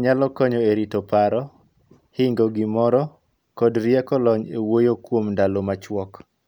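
No technical faults can be heard anywhere in the recording.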